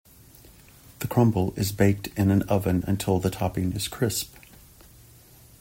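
No technical faults can be heard anywhere in the recording, and the signal stays steady throughout.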